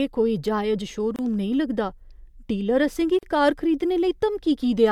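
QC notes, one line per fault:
1.16–1.19 s and 3.19–3.23 s, gap at a join of encoded pieces. The speech drops into silence for about 28 ms after "कोई जायज", then picks up with "नेईं लगदा". A second silence of 40 ms follows "डीलर असें गी". The codec smears the edges, so the silent part is shorter. The gaps sit 2 s apart, which points to pieces about 2 s long, each encoded on its own and joined untrimmed. Each piece keeps its start-up delay and padded last frame, so the sound stops, then resumes where it left off.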